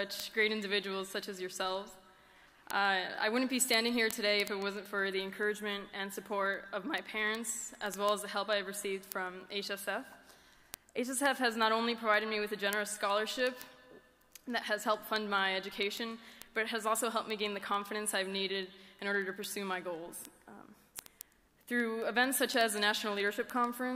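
Word clock ticks from 0.12 to 23.94 s: sharp clicks about every 70 ms, pointing to unlocked digital clocks roughly 300 ppm apart, visible as evenly spaced vertical spectrogram lines.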